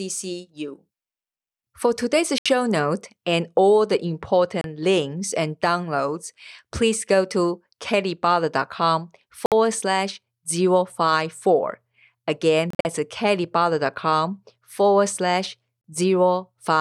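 Likely Bluetooth dropouts, with packets failing to reach the headphones, cut silent holes into this speech at 2.38, 4.61, 9.46, 12.70 (broken gaps over 0.15 s, 116 ms lost in all) and 15.81 s, the others each 29 to 73 ms long, after which the sound resumes further along.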